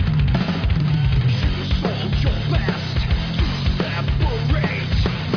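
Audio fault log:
No faults can be heard in the clip. Nothing in the audio calls for a log entry.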